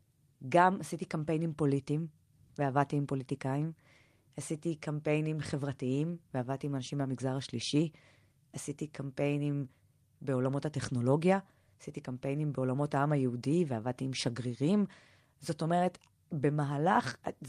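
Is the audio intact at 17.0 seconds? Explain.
Yes, the audio is intact at 17.0 seconds, with no dropout, click, distortion or other fault at that moment.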